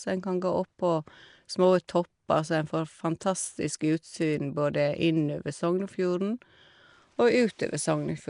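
Nellymoser compression, from start to finish: the speech carries a rough, hissy halo and a smeared, underwater quality, with nothing audible above 10.6 kHz. The likely cause is the old Flash microphone codec, which codes short blocks at a fixed two bits per sample, giving weak bands no bits and filling them with noise. The damage is plainly audible and fits a rate of around 44 kbps.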